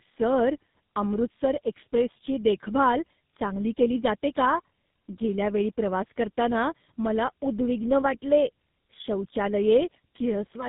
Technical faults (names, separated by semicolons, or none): tandem speech coding